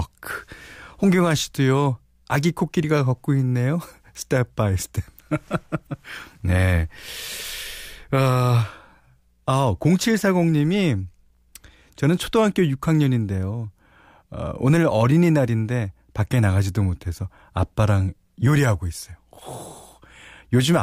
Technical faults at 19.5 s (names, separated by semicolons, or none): none